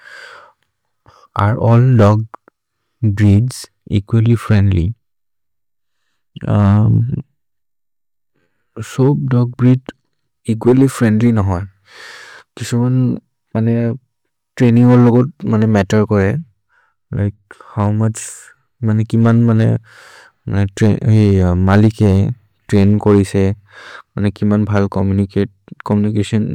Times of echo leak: none

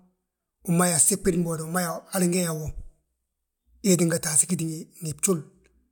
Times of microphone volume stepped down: none

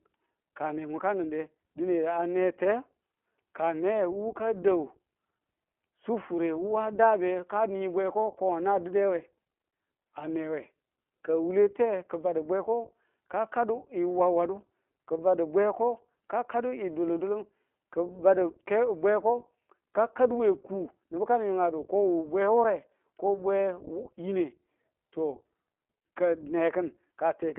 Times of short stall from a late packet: none

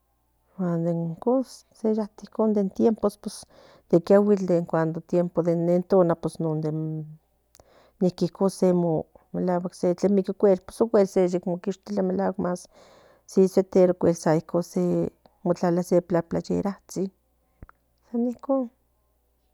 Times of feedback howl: none

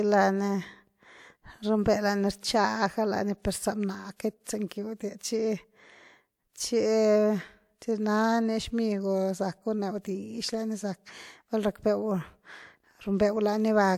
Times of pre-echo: 2.40-2.43, 4.16-4.71

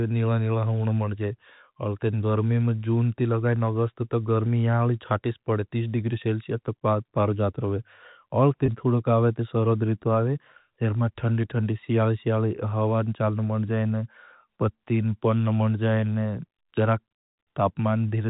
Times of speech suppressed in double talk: none

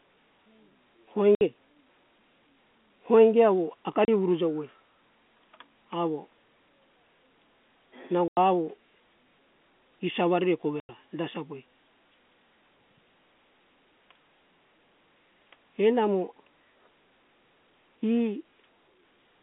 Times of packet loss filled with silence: 1.35-1.41, 4.05-4.08, 8.28-8.37, 10.80-10.89

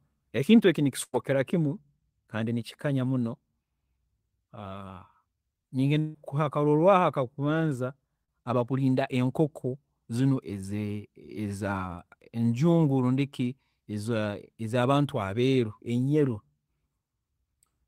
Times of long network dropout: 5.99-6.16

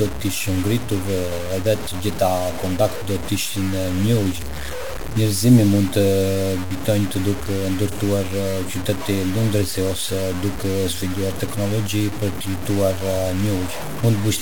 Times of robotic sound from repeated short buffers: none

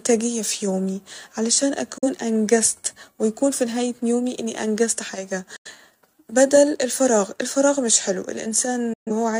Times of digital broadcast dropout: 1.98-2.07, 5.56-5.70, 8.93-9.11

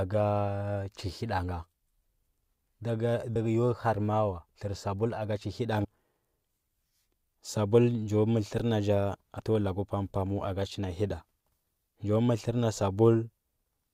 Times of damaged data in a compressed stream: 3.35, 5.83-5.85, 9.38

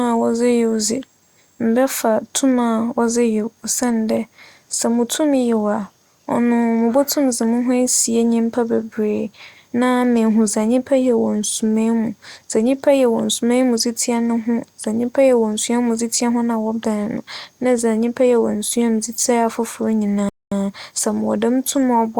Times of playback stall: 20.29-20.52

